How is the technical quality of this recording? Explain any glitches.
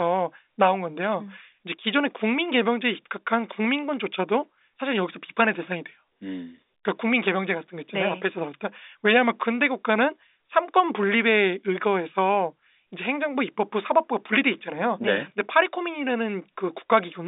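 No glitches; it sounds like ordinary telephone-line speech.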